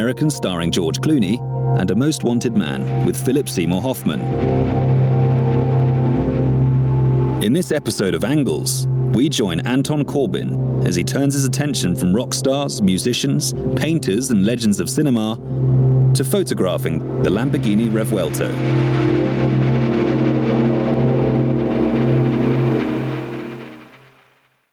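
Throughout the recording, the input gain was likely set far too high for the microphone, with a fast limiter or compressor clamping it down whenever a loud sound arrives. The result is gain pumping, with the level swinging by about 20 dB. Loud and quiet moments sit unnaturally close together, leaving the whole sound flattened and squashed.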